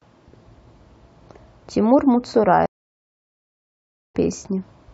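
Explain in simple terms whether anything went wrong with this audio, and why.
Stream reconnect at 2.66 s: the connection dropped, leaving 1.5 seconds of silence before the speech resumes at 4.15 s, roughly half a second further on.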